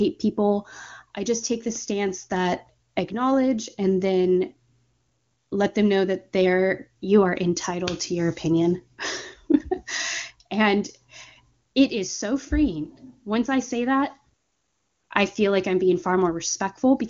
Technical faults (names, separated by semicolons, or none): none